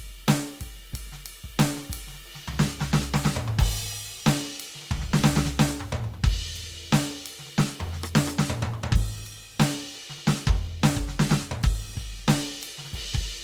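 Throughout the music, tones sound grainy, rough and noisy while the top end still reaches about 20.2 kHz, likely Opus compression in its music mode at a low bitrate.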